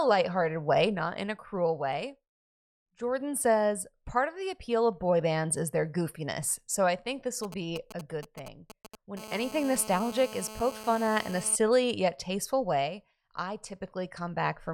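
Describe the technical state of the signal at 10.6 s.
At 10.6 s you're right in the middle of GSM phone buzz, running from about 9.19 to 11.56 s and stopping just before "yet tasteful way I". A nearby 2G phone on a call is pulsing at about 217 Hz, and the audio circuitry rectifies those bursts into a steady, raspy, harmonic-rich buzz sitting about 14 dB below the speech.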